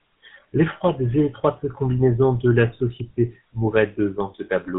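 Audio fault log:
throughout, GSM full-rate codec: speech carries a plainly audible buzzy, gravelly roughness, consistent with a 13 kbps GSM full-rate coder rebuilding the voice from a vocal-tract model driven by sparse regular pulses. A spectrogram shows nothing above 4 kHz, with a coarse, grainy harmonic structure below.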